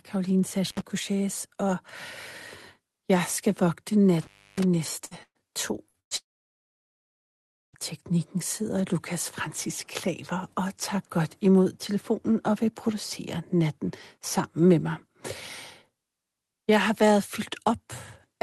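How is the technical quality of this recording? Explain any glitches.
The recording has clear technical faults: two brief signal cut-outs early on, then a cluster of network glitches between about 5.0 and 7.8 s, all heard through a call codec whose band tops out near 12 kHz.

Intermittent contact occurs at 0.66–0.82 s, with the line open for about 66 ms, and again at 4.21–4.63 s, open for about 310 ms. A loose connection briefly breaks the circuit, so the speech drops to faint hiss with crackle at each edge. The waveform shows a sudden near-flat gap framed by sharp spikes.

A burst of packet loss strikes four times: 5.05–5.14 s, 5.23–5.38 s, 5.89–5.97 s and 6.00–6.14 s, each replacing 60 or 120 ms of audio. The receiver stretches the last sound into a fading buzz or hiss, and the two longer bursts end in brief silence before speech resumes further on. A spectrogram shows smeared, repeated harmonics that fade out.

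A long network dropout runs from 6.17 to 7.76 s, just before "teknikken sidder". It is likely caused by no audio arriving for about 1.6 s. After a short concealment tail, the sound falls to near silence for about 1.5 s, which appears as an empty band on the spectrogram and a flat line on the waveform.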